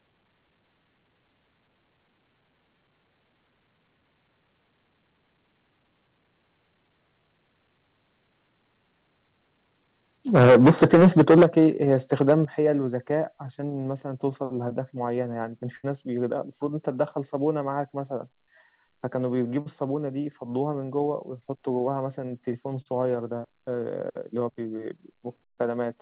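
From 10.34 to 11.67 s the loudest syllables turn harsh and crackly, tops squared off about 12 dB past the limit, with a fair share of the waveform flattened; that's most likely microphone overload, input set too hot for the converter. A milder bout follows at 11.93 to 12.34 s, only about 3 dB over and catching just the odd peak.

Over the same stretch the level drops in sudden steps: about 2 dB at 10.43 s, about 9 dB at 11.43 s, about 6 dB at 12.45 s and about 2 dB at 13.47 s. Voice and background fall together each time, which points to the microphone volume being stepped down, likely by the call software reacting to those distorted peaks.

At 15.76 s there's a burst of packet loss. Roughly 74 ms of the last sound gets stretched out and faded down to fill the hole, then the audio jumps ahead with about 80 ms simply gone, so the sound picks up from a later point.

Two short concealed packet losses come at 19.61 and 22.82 s. 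Each leaves only about 40 ms missing, which the receiver patches by extending the preceding sound before blending back, so you hear a quick smear or wobble rather than a gap, all within the narrow, phone-like band of the G.711 A-law path, which stops at 4 kHz.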